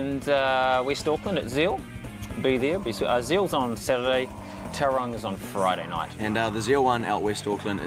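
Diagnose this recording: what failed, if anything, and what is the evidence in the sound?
Nothing in the recording points to a failure at any stage of the signal chain. No moment in the sound offers evidence of a problem that would need a diagnosis.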